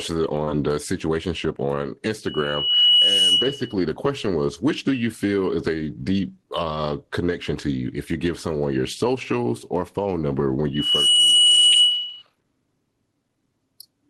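Throughout the speech there is gain pumping: the level ducks by around 10 dB under each loud syllable, likely from gain set far too high feeding a fast limiter. On a waveform the envelope looks flattened, with noise-floor bulges between phrases.

At 0.44–0.48 s a short concealed packet loss leaves a brief smear, where the decoder stretched the preceding sound across the missing gap. A spectrogram shows a blurred, slightly repeated patch.

From 2.26 to 3.74 s a loudspeaker feedback squeal appears: a 2.9 kHz tone builds over about a second to well above the speech as the mic–speaker loop exceeds unity gain. On a spectrogram it is a bright horizontal line. The same 2.9 kHz squeal returns at 10.74–12.22 s, rising faster, in about a third of a second, and a little less loud. A second concealed packet loss at 11.72–11.76 s smears the sound again inside it.

Above all this, the spectrogram's content stops near 12 kHz, which fits a superwideband Opus call at about 20 kbps.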